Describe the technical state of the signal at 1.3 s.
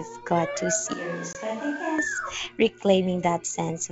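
At 1.3 s the sound has turned hollow and roomy, about 10 dB quieter with faint room noise underneath. This is likely a switch to a distant microphone, lasting from 0.93 to 1.98 s. The abrupt onset and the bass loss set it apart from a gradual fade.

Just after, from 1.33 to 1.36 s, packet loss on an ADPCM call leaves a hard-edged hole of about 20 ms, which fits roughly two packets. The audio then resumes slightly distorted while the decoder resynchronises. That recovery marks it as ADPCM loss rather than a clean edit.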